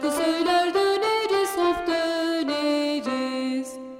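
No technical faults can be heard anywhere in the audio.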